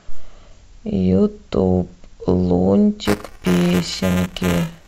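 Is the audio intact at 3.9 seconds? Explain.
No. At 3.9 s the speech is inside a stretch of buffer tearing from 3.05 s to the end of the clip. Writer and reader of the ring buffer cross each period, splicing in roughly a tenth of stale audio. This gives a 375 Hz robotic buzz, which fits a 128-sample buffer.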